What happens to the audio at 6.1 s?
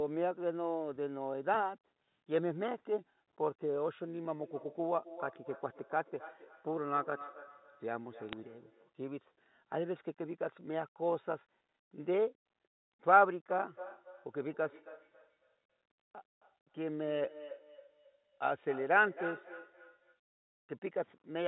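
At 6.1 s the speech is followed by a thinner, ringing copy of itself arriving about a third of a second later, peaking at about 17 dB below the direct speech. This is feedback echo between two devices, running from 4.41 to 8.96 s: a second device in the room plays the call audio, the microphone picks it up again, and the echo canceller cannot remove sound that another device produced.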